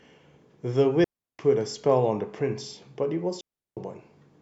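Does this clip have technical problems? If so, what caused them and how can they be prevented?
Yes. The speech drops into clean near-silence twice, from 1.04 to 1.39 s and from 3.41 to 3.77 s, each hole about 0.35 s long with no noise burst on either side. This is a digital wireless dropout: the receiver lost too much data and muted briefly rather than passing corrupted audio. Keeping line of sight, shortening transmitter distance and avoiding crowded frequencies prevents it.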